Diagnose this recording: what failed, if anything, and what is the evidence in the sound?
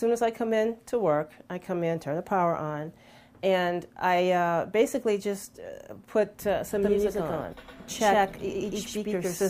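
A doubled audio track appears from 6.83 s to the end: the same signal is mixed in a second time, most likely because a second, slower capture or routing path joined the mix partway through. The copy trails the original by roughly a tenth of a second at about the same level. It is full-band and dry, with no decay or room colour, and it cuts in abruptly, so every onset after 6.83 s is followed by a clean slapback.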